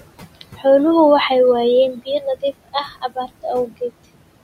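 Throughout the speech, a noise suppressor is pulling down every band it judges to be steady noise, cutting the background by about 21 dB, and that produces noise suppressor artifacts. The room noise, sitting about 15 dB below the speech, drops away between phrases and returns beneath them.

The same suppressor also mistakes parts of the speech itself for noise, so it cuts speech at three points: 0.35 to 0.65 s (a drop of about 19 dB), 1.94 to 2.25 s (about 13 dB), and 2.64 to 3.45 s (about 21 dB). In each stretch, a brief fraction of the sound, roughly a tenth to a fifth of a second in total, is turned down with the background, so soft sounds there come across as swallowed or faint.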